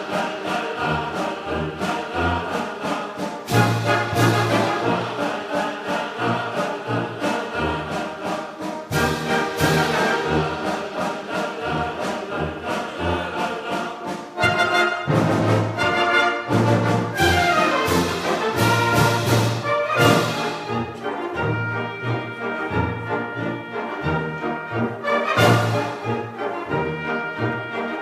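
Nothing technically wrong turns up here; the audio just carries on without any trouble worth pointing to.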